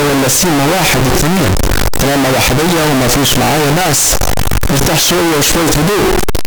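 Throughout the speech, the 8-bit samples were likely read with the wrong sign convention, signed and unsigned mixed up, flipping the top bit so every zero crossing jumps across the whole range. The result is very loud, harsh distortion, with quiet stretches as loud as everything else.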